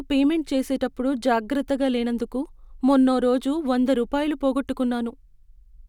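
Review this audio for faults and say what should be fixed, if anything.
No faults; nothing needs fixing.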